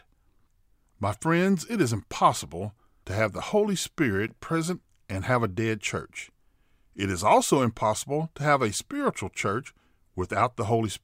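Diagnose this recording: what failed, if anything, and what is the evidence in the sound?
Driver or buffer stage. A block of digital silence at 4.28 s: 10.7 ms of zeros, short enough to be heard as a tick or dip rather than silence. Fits an unfilled 512-sample buffer.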